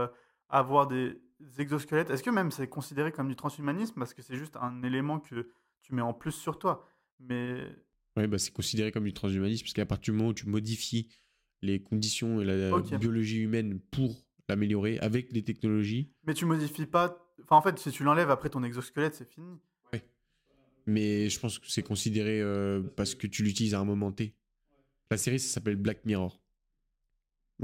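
A faint hiss and graininess rides on the speech for the whole clip, growing on louder passages and on bright, sharp consonants, then disappearing in the pauses. This is sample clock jitter: the converter's timing wanders by roughly a microsecond or two, so each sample lands a touch early or late. Where the waveform changes fastest, that timing slip becomes the biggest amplitude error, leaving noise around 40 dB below the speech.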